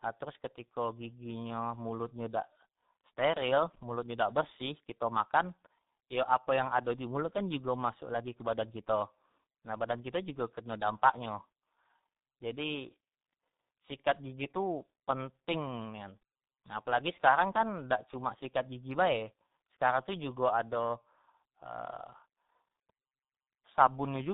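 Speech, with tandem speech coding throughout. It sounds like the call passed through G.726 and G.711 links, then G.723.1, each recoding the last's output. The result is rough, muffled, warbly, and nothing above 3.8 kHz.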